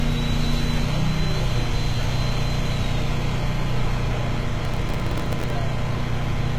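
From the start the treble sounds bright but false, with a gritty, metallic edge on high detail and nothing above about 14.9 kHz. This is likely HE-AAC compression at a low bitrate, near 20 kbps: the upper band is rebuilt by copying lower bands upward, so its harmonics never match the original.

From 4.65 to 5.50 s a burst of gritty crackle tears across the sound, then stops. This is processor overload crackle. Around thirty buffers of only a millisecond or two missed their deadlines, and each one replayed stale audio with hard edges.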